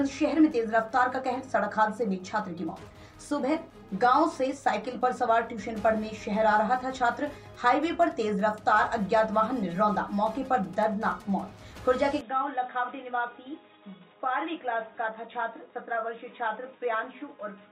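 At 12.21 s the audio turns dull and boxy without any gap, drops a few decibels and gains a faint new noise floor until the end. A spectrogram shows everything above 3.8 kHz cut off; the waveform steps slightly lower. Likely cause: input switched to a poorer device.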